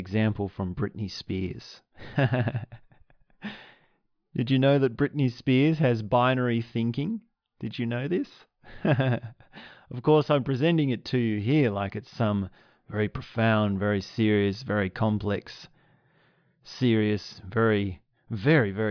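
Nothing goes wrong anywhere in this speech recording, so there's no technical fault to point to at any moment.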